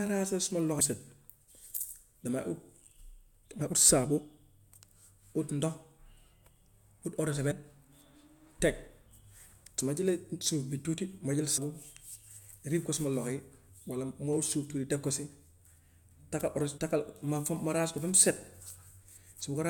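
Damaged data in a compressed stream appears at 0.79 s, 3.60 s, 7.50–7.52 s just after "ut eau de", 11.57–11.59 s just after "ma jël", and 16.77 s. Corrupted bytes make the decoder misread frames and lose sync while it hunts for the next header, producing a brief chirp or blip in the speech.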